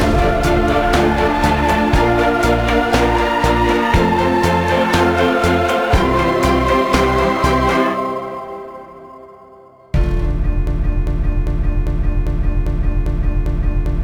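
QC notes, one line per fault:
10.67–14.03 s, broken-record loop: a fragment of about 0.40 s repeats exactly, back to back, eight times until the clip ends, so whatever audio belonged there is missing. This likely comes from the player, encoder or stream stalling and resending its last held fragment.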